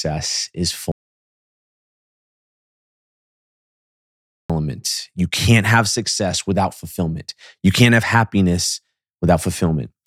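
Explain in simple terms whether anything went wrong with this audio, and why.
The input signal was likely cut off for a while, causing an audio dropout to silence from 0.92 to 4.50 s. That 3.6 seconds of speech vanishes into dead silence.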